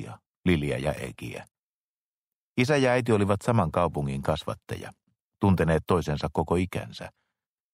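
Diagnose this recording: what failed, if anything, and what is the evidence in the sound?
The failure is at the codec stage: damaged data in a compressed stream. From 7.12 to 7.15 s a brief glitch breaks the sound as the decoder misreads corrupt frames and resynchronises on the next header. Unlike a buffer dropout, the fault lies in the encoded data itself rather than in the delivery of samples.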